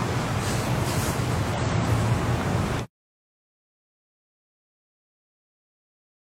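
At 1.54 s the audio is briefly disrupted for about 54 ms, ending at 1.59 s, by damaged data in a compressed stream. Part of the encoded data at this point is corrupt, so the decoder cannot interpret the affected frames correctly. It either misreads or rejects them, loses frame sync, and has to scan forward for a valid header before normal decoding resumes. The result is a short, harsh chirp or blip that cuts across the sound before playback recovers.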